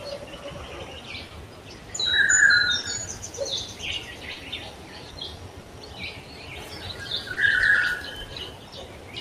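A recording of everyday sounds, carried by a sender whose clock runs roughly 2% slow against the receiver's. This clock drift between sender and receiver keeps draining the jitter buffer, producing recurring timing hiccups. Short stalls from late packets occur at 1.27, 2.80, 4.33, 5.62, 7.33 and 8.68 s. Each holds the last sound for about 30 ms, with nothing lost, and shows as a smeared, frozen vertical band on a spectrogram. Between 1.49 and 1.64 s, the sound is cut by the noise suppressor, sinking about 4 dB for roughly 150 ms. On the waveform this appears as a shrunken envelope, and on the spectrogram as a dimmed patch.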